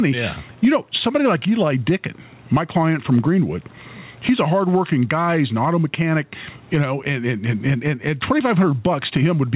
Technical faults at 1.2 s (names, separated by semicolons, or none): gain pumping